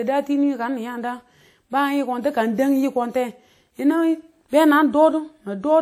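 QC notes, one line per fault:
Throughout, WMA compression: clearly audible ringing, washy smear and hiss that breathes with the speech, likely from an early WMA encoder at a low bitrate, around 48 kbps.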